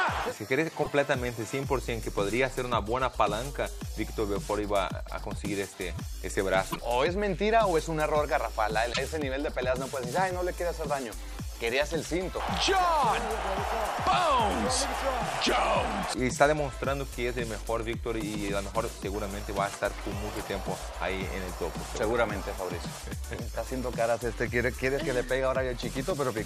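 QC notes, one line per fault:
0.80–0.88 s, 6.68–6.76 s, 8.90–8.98 s: damaged data in a compressed stream. Each is a short glitch of about 80 ms. Corrupted bytes make the decoder misread those frames, lose sync and hunt for the next valid frame header before clean playback resumes.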